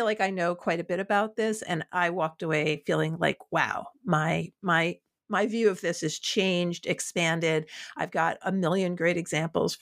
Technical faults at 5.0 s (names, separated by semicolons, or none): none